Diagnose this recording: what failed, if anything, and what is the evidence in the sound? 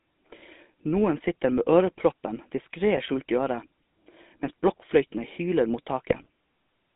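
The codec stage is the main culprit. The whole clip has the buzzy, gravelly roughness of the GSM full-rate codec, and it's plainly audible. The band runs from about 200 Hz to 3.7 kHz, with nothing on top. The codec models the vocal tract and drives it with a coarse, regularly spaced pulse excitation, throwing away most of the fine detail. That grit fits a roughly 13 kbps full-rate link.

On top of that, the network side adds GSM bit errors in three bursts: 0.42 to 0.46 s, 2.94 to 3.00 s, and a longer one from 6.08 to 6.28 s. Each one breaks into a squawky, gargled pop. Flipped bits get past the radio link into the decoder and corrupt the filter, pitch or gain parameters, so a frame comes out with a bent spectrum or a level jump. The last burst spans several frames, so it runs longest.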